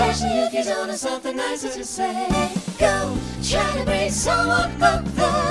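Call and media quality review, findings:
No faults heard anywhere in the clip, nothing here needs a ticket.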